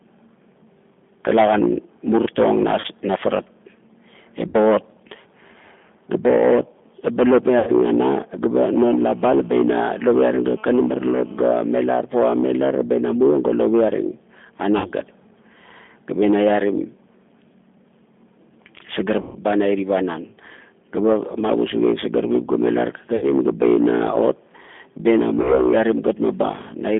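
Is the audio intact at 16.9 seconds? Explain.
No. At 16.9 seconds the speech carries G.729 codec damage, present across the whole clip. The codec rebuilds speech from a vocal tract model and a few pulses per frame. The band stops near 3.5 kHz, so the voice sounds muffled, rough and synthetic, which fits an 8 kbit/s line.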